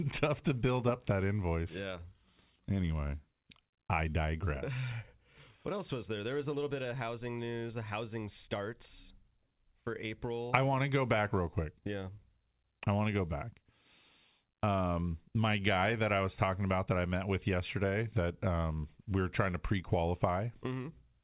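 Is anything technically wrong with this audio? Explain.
No, nothing is wrong; the speech has come through a G.711 mu-law call path at 64 kbps, and, as expected for that codec, it carries nothing above 4 kHz.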